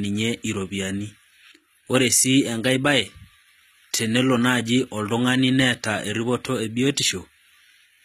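From start to finish, the speech carries plainly audible compression damage. It sounds like HE-AAC compression, likely at a low rate around 20 kbps. The lower spectrum is coded directly. The treble is not the original. It is rebuilt by copying lower bands upward under a coarse envelope. So the top end stays bright but false, and harmonics fail to line up across the join. S sounds turn gritty and lispy. Nothing is heard above 14.9 kHz.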